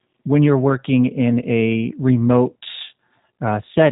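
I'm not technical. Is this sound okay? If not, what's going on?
No. The whole clip has been squeezed through the G.729 codec, a phone-call format that rebuilds speech from a rough model of the voice. Everything above 3.8 kHz is gone, so it sounds muffled. The speech stays clear but rough and slightly robotic.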